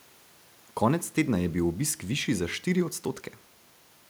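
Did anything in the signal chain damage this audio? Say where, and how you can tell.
No, nothing in the signal chain damaged this audio, and there is no point where damage can be heard.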